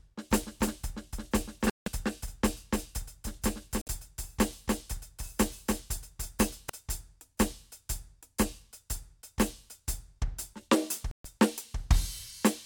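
From 0.46 s to 6.69 s the music has a doubled audio track: a second, full-band copy trails roughly a third of a second behind, a few dB quieter, with no reverb tail. It's likely a slower capture path or a misaligned edit, and it cuts in and out abruptly.

Inside that stretch come two Bluetooth stalls, at 1.70 s (166 ms of silence) and 3.81 s (55 ms), and a third at 11.11 s (132 ms). Each drops cleanly to nothing, then resumes, likely the headphone buffer running dry while interference delayed resent packets.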